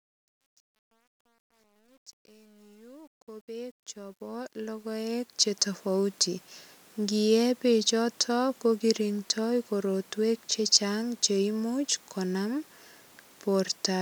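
From 0.0 to 5.58 s, truncation distortion on a fade: the fade-in lost low-order bits without dither, consistent with about 10-bit resolution. It is grittiest until 4.33 s. The waveform shows stair-stepped squares, and the spectrogram shows broadband hash.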